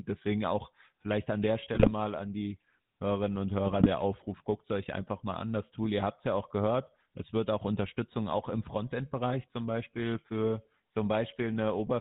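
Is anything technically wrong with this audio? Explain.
Yes. GSM full-rate codec damage runs through the whole recording: the sound, speech, has been squeezed through a vocal-tract model excited by a sparse, regular pulse train, which fits full-rate GSM at 13 kbps. Nothing above 4 kHz survives, and the voice carries a plainly audible buzzy, gravelly roughness.

GSM bit errors strike twice, from 1.74 to 1.91 s, right after "auch vielleicht an der" and before "an die", and again from 3.66 to 3.87 s. Corrupted filter, pitch and gain parameters reached the decoder, so those frames decode with a warped spectrum or jumped level, breaking into squawks, pops and gargling.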